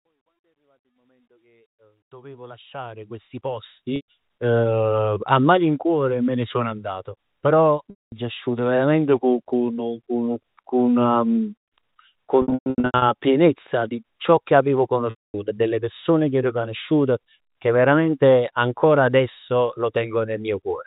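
Packet loss with pitch repetition strikes at 3.96 s, at 7.9 s after "ne sono andato però", in scattered bursts from 12.42 to 13.02 s ending before "pienezza di ciò che", and at 15.1 s after "di ciò che avevo". Each gap, up to about 240 ms, is filled by looping the last pitch period. Short runs sound like a held, buzzy note. Longer ones fade to silence before "asciuto verament" and "e delle persone che" cross-fade back in. Unlike a plain dropout, every gap begins with that sustained buzz rather than a sudden hole.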